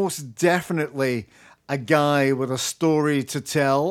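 Listening to the speech here, nothing stood out as a technical fault at any point.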